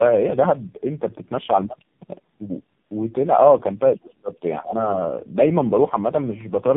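Throughout, the speech sounds rough, muffled and warbly, with nothing above 3.8 kHz: tandem speech coding, with about three speech codecs in a row, ending in AMR-NB, each recoding the last one's damage.

From 3.93 to 4.32 s the speech drops sharply, by roughly 30 dB, then dips again more lightly at 4.60–4.76 s and 4.92–5.07 s, likely speech suppressed in double talk by an echo canceller.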